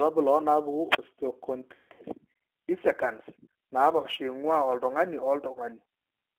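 The speech runs through the G.729 codec for the whole clip. The sound is confined to a telephone band of roughly 300 Hz to 3.4 kHz, which fits G.729A at 8 kbit/s. The codec rebuilds each 10 ms frame from a vocal tract filter, a pitch predictor and a few pulses. That synthesis leaves the voice plainly rough and slightly artificial. Consonants lose their crispness.

Sample clock jitter also runs throughout. The converter's clock wanders by a few microseconds, so samples land slightly off time. The error is worst where the waveform changes fastest. It comes out as a faint grainy roughness, some 35 dB below the signal. It rises on loud, bright syllables and drops away in the pauses.

At 0.89 s there is a wireless microphone squelch dropout, lasting until 0.99 s. The FM radio link fades, and hiss swells briefly. The receiver's squelch then cuts the output for about 37 ms. The voice comes back after that hole of near silence.

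From 1.75 to 2.04 s, VoIP packet loss is concealed by the speech codec. About 210 ms of audio is missing, scattered over 240 ms, which fits seven lost packets. The longest gap is 150 ms. The decoder repeats its last pitch and filter and lowers the gain. The speech smears into a buzzy, fading tone. Because each frame builds on the previous one, the voice stays thin briefly after real audio returns.

Smaller concealed losses follow. One runs from 3.98 to 4.07 s, covering about 60 ms, likely two packets. Another runs from 5.53 to 5.60 s, covering 30 ms. Each gives a short buzzy smear and a brief weak patch.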